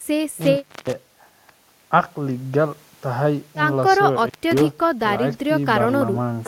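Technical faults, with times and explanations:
0.41–1.02 s and 4.19–4.62 s: intermittent contact. A loose plug or cable momentarily lost connection, dropping the speech out for about 0.31 s and 0.22 s respectively. Crackle marks each break and remake of the contact, with faint hiss while open.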